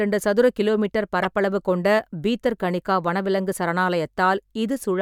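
A corrupt frame decoded at 1.23 s breaks into the speech as a brief glitch. Flipped bits in one compressed frame were decoded anyway, so misread gains and codes scattered energy to wrong frequencies for that frame, peaking around -10 dBFS.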